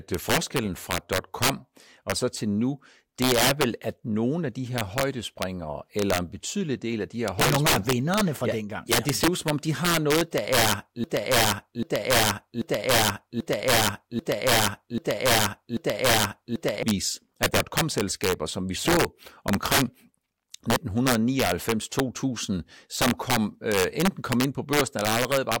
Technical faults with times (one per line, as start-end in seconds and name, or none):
0.00-25.60 integer overflow
11.04-16.83 broken-record loop